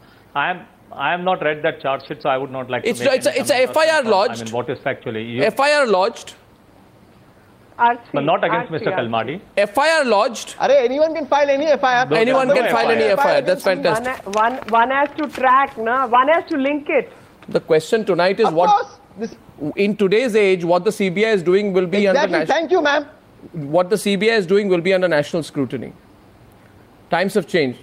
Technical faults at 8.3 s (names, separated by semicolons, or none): none